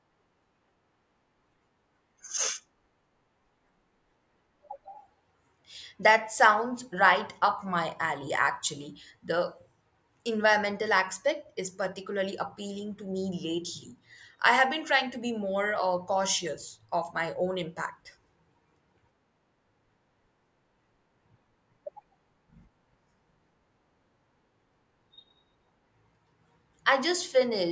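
No technical faults are audible.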